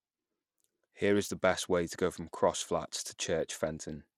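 From start to finish the speech sounds gritty and dulled. The upper treble thins out and flickers in and out, and a rough, grainy noise and aliasing ride on the voice. This is likely Bluetooth SBC compression. With a starved bit budget, which fits a bitrate of around 96 kbps, the codec's simple sub-band scheme gives the top bands almost nothing and quantises the rest coarsely, so the damage is plainly audible.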